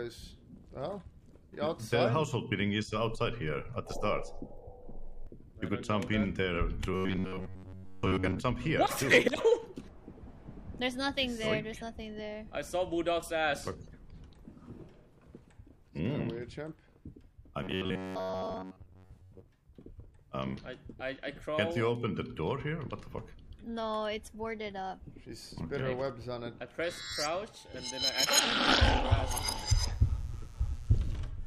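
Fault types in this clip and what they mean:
Robotic sound from repeated short buffers: a rigid metallic buzz near 94 Hz at 6.9–8.4 s and 17.6–19.4 s, likely an 11 ms fragment replayed over skipped audio.
Mains buzz: a steady, raspy buzz built on 60 Hz harmonics from 29.4 to 31.2 s, about 30 dB below the signal, from switching spikes leaking in.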